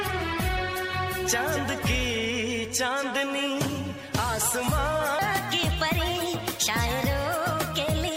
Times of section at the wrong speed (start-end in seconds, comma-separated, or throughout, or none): 5.19-8.17